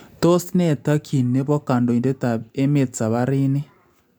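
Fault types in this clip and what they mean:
No technical faults are audible.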